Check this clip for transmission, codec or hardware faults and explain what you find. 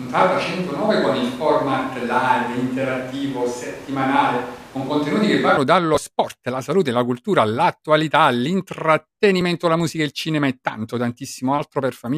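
One fault is present. From the start to 5.57 s, just before "dallo sport", the speech sounds roomy, hollow and thin in the bass, with room noise about 20 dB below it at an unchanged level. The likely cause is a switch to a distant microphone, which captures more reflections and noise than direct sound until the close microphone abruptly returns.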